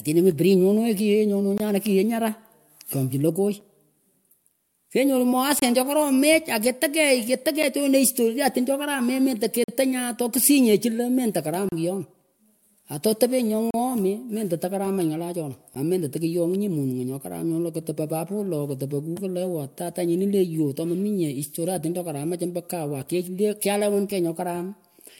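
Brief hard-edged dropouts cut into the speech roughly every two seconds, at 1.58 s (21 ms), 3.60 s (7 ms), 5.60 s (26 ms), 7.63 s (8 ms), 9.64 s (44 ms), 11.69 s (33 ms), 13.71 s (36 ms) and 15.75 s (11 ms). These are gaps between stream segments. Consecutive 2-second segments don't quite meet in their timestamps, so the player fills each hole with silence. Nothing is lost; the following audio simply arrives slightly later.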